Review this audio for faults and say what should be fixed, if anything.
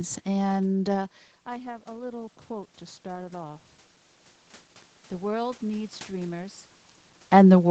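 Automatic gain rising, 0.93 to 3.73 s: the input dropped by about 17 dB as the talker moved back from the microphone, and the gain control slowly raised its gain by about 6 dB. The speech and the room noise swell together over nearly three seconds. A faster gain-control response, or the talker keeping a steady distance from the microphone, would prevent it.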